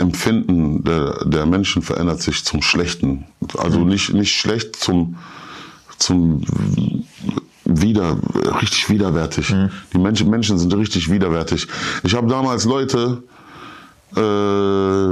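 Nothing here stands out as a technical problem; the sound simply runs along without any glitch, dropout or odd artefact catching the ear.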